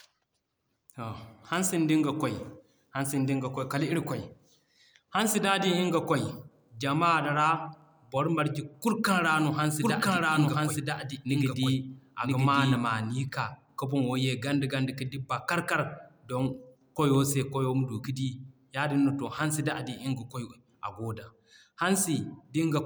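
A speech clip in which, from 9.82 s to 12.76 s, just after "ra no hansi", every sound is heard twice: a second full-band copy trails the first by about a second, at roughly the same loudness, with no decay or room colour, and it cuts in and out abruptly at those edges. This is a doubled audio track, likely from the same signal being captured again through a slower path or an edit holding two misaligned copies.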